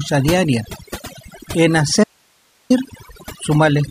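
Overdone noise removal runs through the whole speech clip. The noise reduction was set too hard. It pulls individual frequency bands down whenever they sit near its noise estimate. The background drops and breaks up into twinkling specks.

From 2.04 to 2.70 s there is an audio dropout to a faint residue. The sound cuts off abruptly for about 0.66 s. Only hiss remains, roughly 40 dB below the speech. The likely cause is a lost signal feeding a path that stayed live.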